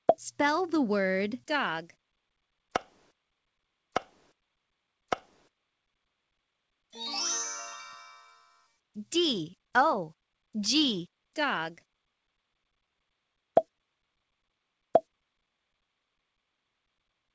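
No technical faults can be heard anywhere in the audio. It arrives through a call path with nothing above 8 kHz, a band limit that fits a wideband codec such as G.722.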